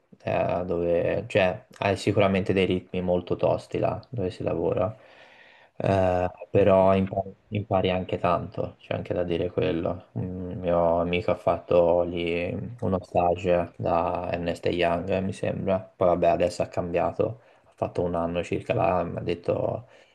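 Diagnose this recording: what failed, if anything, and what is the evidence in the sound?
Nothing failed, and the sound shows no evidence of a fault at any stage of the recording chain.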